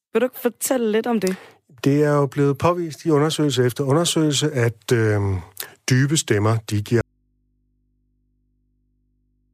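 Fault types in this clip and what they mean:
Audio dropout to a faint residue: Right after "dybe stemmer de", at 7.01 s, the speech cuts off abruptly and never returns, leaving only a low mains hum roughly 45 dB below the speech level through to the end of the clip. The break is instant, with no fade or natural pause. The likely cause is the wanted signal being lost while the path after the break stayed live, so the open input kept passing hum.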